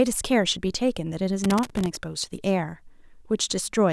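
From 1.44 to 1.96 s, loose connector crackle: a worn contact chops the speech irregularly, giving scratchy bursts, unlike steady, evenly spaced digital clicks.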